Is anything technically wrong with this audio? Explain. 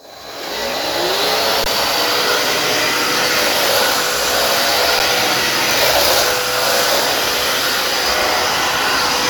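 Yes. The audio has two brief underruns with held sample: one from 1.64 to 1.66 s, a 20 ms gap, and another at 4.99 s lasting about 9 ms. Each time the output buffer ran dry, the converter kept holding its last value, so the waveform goes flat. That is why the sound stops with almost no click. A zero-filled dropout would snap abruptly to silence. In the two gaps, roughly 20 ms and 10 ms of live audio was lost rather than resumed.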